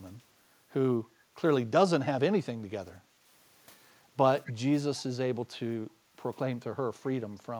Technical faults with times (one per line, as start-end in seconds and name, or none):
3.06-3.19 background gated by the echo canceller
4.46-4.53 echo leak
4.96-5.03 echo leak